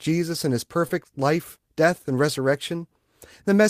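At 0.87 s, between "and his" and "life death and", a short concealed packet loss replaced about 20 ms with extrapolated sound, giving a brief smear.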